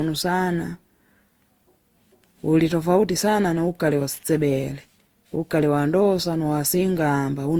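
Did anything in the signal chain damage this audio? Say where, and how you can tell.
Yes, at the codec: it's swirly, hollow and smeared with blurred attacks throughout, likely generation loss from roughly five passes of re-encoding with an Opus-type codec.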